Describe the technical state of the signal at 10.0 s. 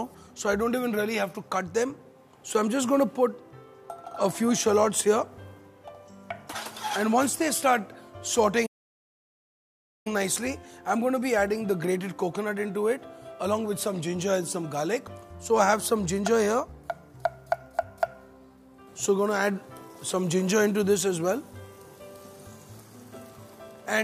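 At 10.0 s you're inside a playback stall: the sound cuts out mid-flow from 8.66 to 10.07 s, about 1.4 s of silence, likely the player running dry or its thread getting blocked.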